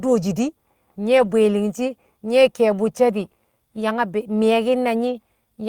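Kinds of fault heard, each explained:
Lost packet rebuilt from error correction: around 1.17 to 1.31 s, missing packets were replaced by lower-bitrate copies from later packets, leaving no gap but about 80 ms of rougher, noisier speech.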